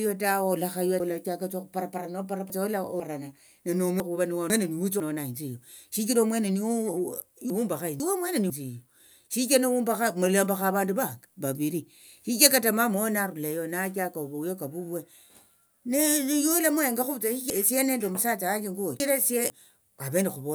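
Chunks out of order occur at 1.0 to 3.0 s, 4.0 to 5.0 s, 7.5 to 8.5 s and 17.5 to 19.5 s. Each time, a half-second chunk of speech plays late, after the three chunks that should follow it in the first and last spans and after one chunk in the two middle spans, so the sound jumbles across three hard joins. Unlike a dropout, no audio is missing or silenced, and unlike a stutter, nothing repeats.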